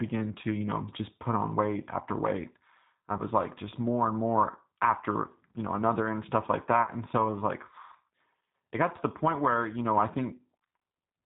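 Throughout, the speech has a plainly audible rough, synthetic quality, with nothing above 4 kHz. This is the G.729 codec at 8 kbit/s, which rebuilds each 10 ms frame from a vocal tract filter, a pitch predictor and a few pulses.

From 3.17 to 3.22 s, and again from 6.83 to 6.91 s, the sound smears into a fading buzzy tone or coloured noise. This is VoIP packet loss concealed by the speech codec. The decoder filled in the missing audio by extrapolating from its last pitch and filter and lowering the gain frame by frame. The gaps are 20 ms and 40 ms long, which points to one and then two lost packets. Because each frame builds on the one before, the speech stays weakened briefly after the stream resumes.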